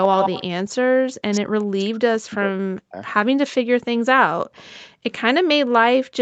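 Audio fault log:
0.03–0.44 s and 4.57–4.65 s, echo leak: a delayed copy of the voice trails it by about 136 ms. The first is strong, only slightly below the direct sound; the second is barely audible. The far end's canceller likely let some loudspeaker pickup slip back.
0.63–0.85 s and 3.95 s to the end, background gated by the echo canceller: the room sound drops by about 40 dB. The first gap lasts around 200 ms; the second never recovers. The canceller clamped the microphone while its loudspeaker played.
1.13–2.96 s and 3.5–3.67 s, speech suppressed in double talk: the talker's voice sinks very deeply, almost to nothing, for roughly two seconds and then for a short moment. Both sides were likely talking together, and the canceller turned everything down.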